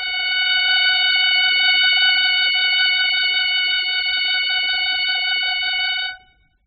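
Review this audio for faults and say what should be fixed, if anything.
The music sounds dull and warbly throughout, with nothing above 5.1 kHz, likely from heavy AAC compression at a very low bitrate, around 8 kbps. Encode at a higher bitrate to keep the full bandwidth.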